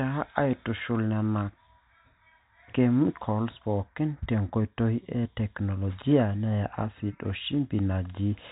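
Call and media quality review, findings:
No faults found; G.711 telephone band, ceiling 3.8 kHz.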